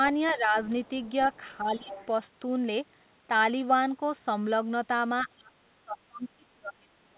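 Other side's voice leaking through appears first at 0.27 to 0.31 s, roughly 25 dB under the speech, likely because the loudspeaker playback reached the microphone and the echo canceller left a residue. It sounds like a faint second voice behind the talker.

Speech suppressed in double talk follows at 0.31 to 0.57 s, with the talker dipping by a few decibels. The canceller likely mistook overlapping talk for echo and turned everything down together.

Leakage returns faintly, about 35 dB down, at 0.82 to 1.1 s and 1.33 to 1.57 s.

Suppression comes back at 1.6 to 1.92 s, deeper at around 15 dB. It overlaps stronger leakage at 1.77 to 2.06 s, only about 15 dB below the speech.

From 5.23 s to the end, suppression pulls the talker down by around 30 dB, nearly cutting it out.

Throughout, the narrowband call path leaves nothing above 4 kHz, which fits G.711 A-law at 64 kbps.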